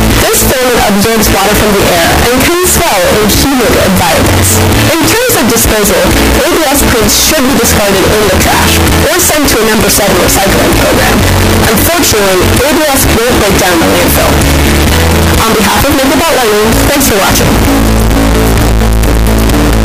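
From the first moment to the end, the audio is a wall of extremely loud, harsh distortion, and quiet stretches blare as loudly as everything else. This points to signed and unsigned mixed up, likely with 16-bit samples read in the wrong format. Flipping the top bit turns every small swing around zero into a jump across the full range, so each zero crossing becomes a huge jump and low-level detail is buried under constant harsh distortion.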